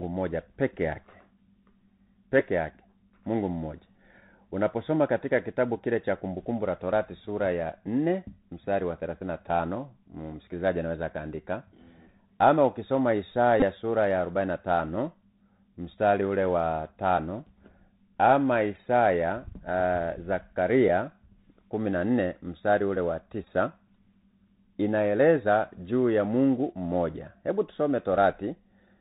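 Throughout the clip the speech passes through the Bluetooth CVSD headset codec, a one-bit delta modulator whose adaptive step, at a rate that fits 64 kbps, tracks the waveform only up or down. The link is narrowband, so nothing above 4 kHz survives. Loud high-frequency sounds outrun the step and distort, s sounds turn scratchy, and a granular hiss sits under the speech.

At 0.40 s, just before "peke yake", a lost voice packet makes the headset decode the previous packet's bits again, a Bluetooth headset packet repeated about 3.8 ms long that is heard as a small tick. At 13.60–13.63 s, between "ama ukisoma" and "sura ya", a run of repeats covers about 18.8 ms, which points to five lost packets. Repeating every 3.75 ms produces a brief buzz near 267 Hz. After "mstari ule wa", from 23.44 to 23.48 s, repeats are scattered over 37.5 ms and total about 26.2 ms, which points to seven lost packets. 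The longest unbroken stretch is about 15 ms.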